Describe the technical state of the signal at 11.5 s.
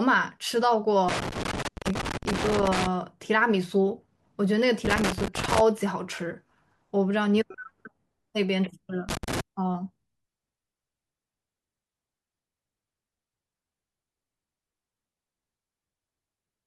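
At 11.5 s the audio is intact, with no fault present at that moment.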